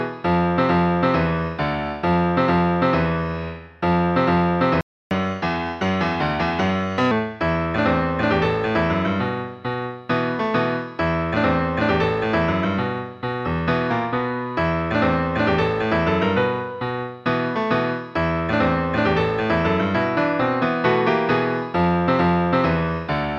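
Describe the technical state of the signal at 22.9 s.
At 22.9 s the signal is intact, with no technical fault present at that moment.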